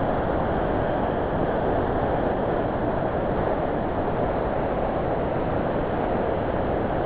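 Music clip, except you never actually hear the music: from 0.0 to about 7.05 s it's just steady comfort noise. That points to sound dropped by the voice detector, likely because it read the music as background and stopped sending, with nothing above 4 kHz, fitting a 64 kbps G.711 call path.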